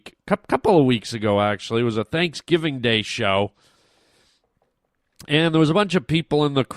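Speech recording, no technical faults detected.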